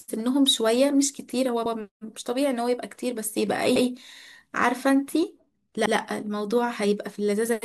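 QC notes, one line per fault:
1.66–1.76 s, 3.76–3.86 s, 5.86–5.96 s: overlapping chunks. At each of these joins, about 100 ms of the speech is heard a second time. The audio was handled in 2 s blocks, and each new block begins a little before the previous one ended, so the shared stretch plays twice. That doubled fragment comes across as a brief stutter or click at the seam, recurring at a steady interval of roughly 2.1 s.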